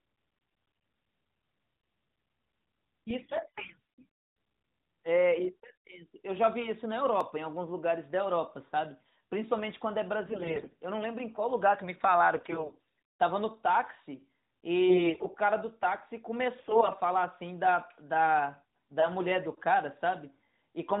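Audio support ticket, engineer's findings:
AMR bit errors, 0.36–0.90 s, 3.22–3.78 s, 10.26–10.73 s, 12.36–12.75 s, 14.89–15.35 s, 16.58–16.91 s. Voice turns hoarse, scratchy, gargly for a third to half a second each. Pitch and level hold, with no muting or gap. Fits flipped low-protection bits on a weak radio link, with the checksum still passing, so pulses and the finer pitch, gain and spectrum values are decoded wrong. Unlike lost-frame concealment, nothing drops out or fades.

Dropped buffer (overrun), 7.21 s. Abrupt jump forward in the speech with no silence. Around 15 ms is missing. Likely cause: capture side not reading samples before the hardware overwrote them, so the surrounding audio is spliced directly. A network dropout would leave a gap or a concealment smear rather than a hard join. AMR-NB narrowband path: audible 4 kHz ceiling, with light codec colouring.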